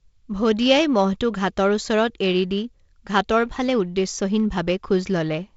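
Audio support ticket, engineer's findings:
Nothing stood out on listening through this speech over G.722 wideband telephone coding at 48 kbit/s, with content reaching to about 7.7 kHz and no event to log.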